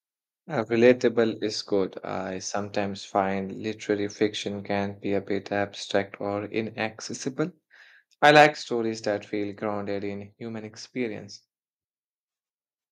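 At 0.85 to 0.91 s, and again at 8.24 to 8.46 s, the loudest syllables take on a brief harsh crackle, the sound of peaks flattened against a ceiling. This is likely microphone overload, with input about 1 dB and then about 3 dB past the converter's limit. A small share of samples are cut in the first burst and a few percent in the longer second one. Unlike a level change, the distortion comes and goes with each peak.

Just after each burst, at 1.02 s before "is good I sometimes" and at 8.55 s before "stories that feel grounded", voice and background together drop suddenly by about 2 dB and then about 5 dB, and stay lower. This is likely the microphone volume being stepped down in response to the overload. Here the sound loses loudness without any added distortion.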